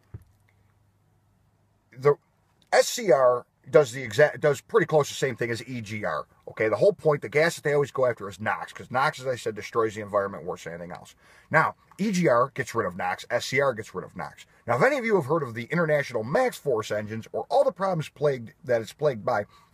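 No technical faults can be heard anywhere in the audio.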